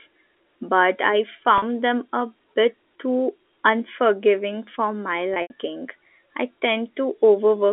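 At 1.58 to 1.62 s, after "but I", and 5.34 to 5.50 s, after "too unforgiving for my", packet loss with pitch repetition gives a brief buzzy held tone, with the second, scattered loss fading out into silence before the signal returns.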